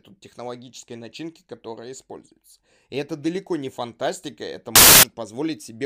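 Samples built from the wrong bytes, from 4.76 to 5.03 s in this speech clip, right after "далеко не фантастика это": each sample's bytes are assembled in the wrong order or offset, so the rapidly changing low bits dominate, producing a burst of loud, harsh broadband noise.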